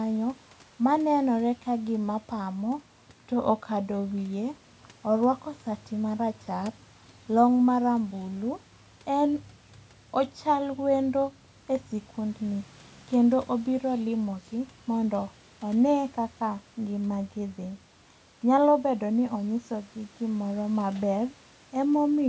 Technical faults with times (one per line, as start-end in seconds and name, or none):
none